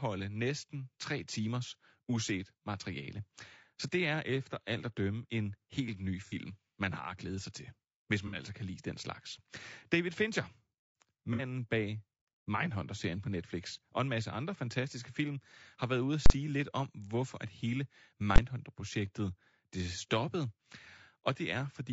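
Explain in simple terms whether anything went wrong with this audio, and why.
Throughout the speech there is a rough, grainy quality with a thin, artificial top end, likely from low-delay AAC compression, the kind used for video calls.

At 6.26, 8.27 and 11.33 s, AAC frame loss with concealment leaves short smeared, noisy patches of about 60 ms where the decoder guessed the missing audio.

At 16.26 s (40 ms) and 18.36 s (20 ms), invalid numbers at full scale pinned the output flat at one extreme value, far beyond the speech's peaks, heard as sudden loud bangs.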